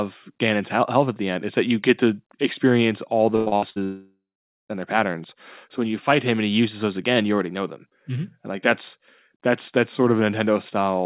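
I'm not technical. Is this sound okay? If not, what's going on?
No. Right after "get to experience all", from 3.36 to 3.78 s, there's repeated packet loss: four short gaps, each patched by stretching the last sound, so the speech turns choppy and robotic. Then, from 3.84 to 4.71 s, a long network dropout is the likely cause of one long hole. The sound buzzes briefly, fades to about half a second of silence, and comes back at "their patterns" with that part missing. Unlike the choppy stretch, this is one long break. The phone-like dullness, with nothing above 4 kHz, comes from the call line.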